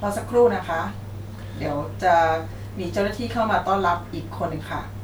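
Nothing in this speech recording stands out as a technical fault at any point, so there's nothing to flag here.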